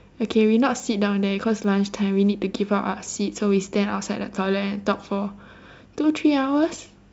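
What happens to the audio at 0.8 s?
At 0.80 s there is a small forward jump in the speech, likely a dropped buffer (overrun). The input wasn't read before the hardware refilled it, so roughly 10 ms of audio is missing and the two sides are butted together with no gap. On the waveform this shows as a sudden discontinuity where the wave jumps to a new level; the spectrogram shows a thin vertical broadband line at that instant.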